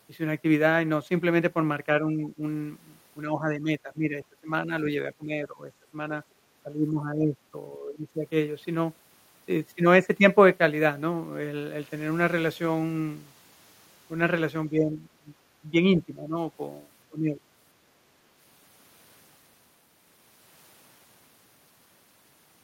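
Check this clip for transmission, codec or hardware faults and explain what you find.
The recording shows two echo-canceller faults: repeated speech suppressed in double talk, and one brief case of background gated by the echo canceller.

Speech suppressed in double talk occurs at 2.11–2.42 s, 3.3–6.11 s, 6.9–7.35 s, 7.78–8.08 s, 14.71–15.28 s, 15.72–16.37 s and 17.1–17.41 s. The speech level dips by around 10 to 20 dB, deepest near 14.7 s, in short bursts of a few hundred milliseconds; the 3.3–6.11 s stretch loses about one and a half seconds in pieces. This is likely the canceller failing to tell near-end speech from loudspeaker echo while both were active, and attenuating everything.

Background gated by the echo canceller appears at 6.51–6.62 s. For roughly a tenth of a second the room sound drops by about 9 dB, then recovers. The canceller clamped the microphone path hard while far-end audio was playing, taking the ambient noise floor down with it, and released once it judged the echo gone.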